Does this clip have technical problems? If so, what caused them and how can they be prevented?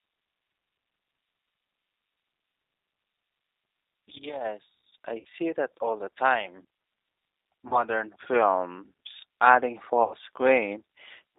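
Yes. The whole clip carries G.729 codec damage: speech is squeezed into a band of about 300 Hz to 3.7 kHz and rebuilt at 8 kbit/s from a vocal tract model plus a few pulses per frame. The result is a plainly audible rough, slightly synthetic texture. A clean narrowband telephone line would sound dull but smooth, so the grainy buzz points to the codec rather than just the band limit. A wideband codec at a higher bitrate would prevent this.

There are also three gaps from VoIP packet loss concealed by the speech codec, at 5.19–5.27 s just before "that all the time", at 7.68–7.83 s just before "films adding", and at 10.03–10.14 s just after "films adding". About 60 ms, 30 ms and 90 ms of audio went missing, which fits two, one and three lost packets. The decoder extended its last pitch and filter into a fading sound that stays weak briefly after the audio resumes, unlike a plain dropout that simply goes silent. 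A jitter buffer with forward error correction on a less congested network would prevent this.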